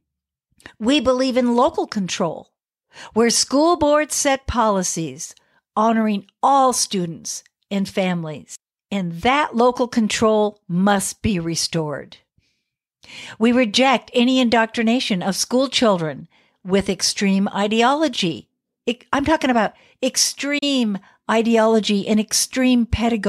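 Right around 20.58 s the speech drops out in a digital broadcast dropout, a short hole lasting until about 20.63 s. The receiver muted on a bad frame, roughly 32 ms of audio that fits a single lost frame, with a quick 8 ms fade rather than a hard click.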